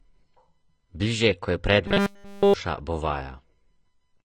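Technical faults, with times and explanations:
Throughout: AAC compression, likely. The speech sounds dull and smeared, with a fizzy, warbly edge on sibilants. That's the typical result when a codec throws away detail to hit a low bitrate, probably around 24 kbps.
1.88 to 2.54 s: Robotic sound from repeated short buffers. The speech turns into a stiff metallic buzz at 200 Hz. Essentially all of this stretch is repeats, likely of a 5 ms chunk replayed over and over while the real audio was skipped.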